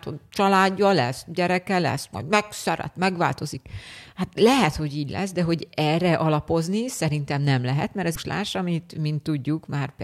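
A speech recording with one fault: damaged data in a compressed stream, heard as a short disruption from 8.11 to 8.17 s, about 55 ms long. At that point the compressed bitstream carries corrupted bytes, so the decoder cannot interpret the affected frames correctly. It loses frame sync, then resumes normal decoding once it locks onto the next valid frame header.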